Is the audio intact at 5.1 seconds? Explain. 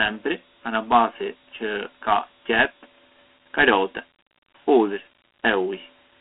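No, 5.1 seconds sits inside Dialogic VOX ADPCM coding that runs the whole clip. The speech has that narrow phone-line feel, thin below about 250 Hz and rolling off around 3.5 kHz, with nothing above 3.9 kHz. That points to 4-bit ADPCM at 8,000 samples a second, roughly 32 kbps. Each sample stores only a coarse step change, so the codec damage is plainly audible as a gritty hiss that follows the speech.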